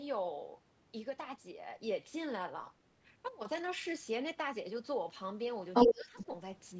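From 5.73 to 6.26 s, the other side's voice leaks through. A second voice comes through alongside the talker, around 15 dB relative to the speech. The likely cause is loudspeaker playback that the echo canceller did not fully remove from the microphone.

From 5.88 to 6.28 s, the talker's speech is suppressed in double talk. With both voices present, the talker dips for roughly 300 ms in total, dropping by up to about 15 dB. This is likely the echo canceller turning everything down when it could not separate the two voices.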